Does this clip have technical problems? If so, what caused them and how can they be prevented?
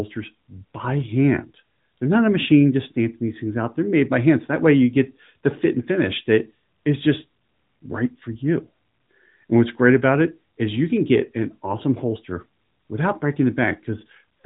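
No, there are no technical problems in this speech.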